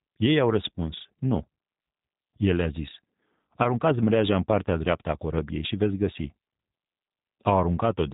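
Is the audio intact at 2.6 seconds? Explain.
No. At 2.6 seconds the speech carries G.729 codec damage, present through the whole clip. The coder rebuilds speech from a vocal tract filter, pitch prediction and sparse pulses, which fits an 8 kbit/s coder. Nothing above 3.8 kHz survives. The speech sounds clearly rough and synthetic.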